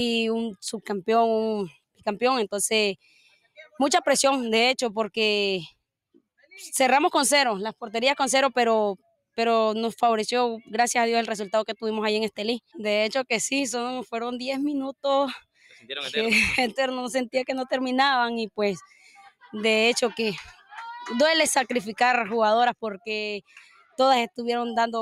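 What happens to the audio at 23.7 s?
From 23.45 to 23.99 s the sound is cut by the noise suppressor. A speech-oriented suppressor classifies the material as noise and pulls it down by up to about 18 dB over roughly half a second. Sustained and decaying content sinks or has its tail truncated, while any sharp onsets in that window pass with less loss, so the moment sounds hollowed out and briefly ducked.

This sits on top of a noise suppressor applied to music or sounds, active across the whole clip. Because the processor treats steady tones, ambience and reverberant decay as noise, the gain swings by around 5 dB as it reacts. That produces pumping and flutter, with attacks surviving better than held material. At 23.7 s the two combine, so the deep cut lands on audio that is already unstable in level.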